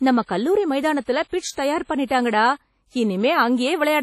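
Throughout the speech, the sound rings and washes, with a hiss that swells and fades alongside the voice and nothing above 13.9 kHz. That is likely heavy WMA compression near 32 kbps, whose long transform blocks smear quantisation noise and drop weak spectral lines.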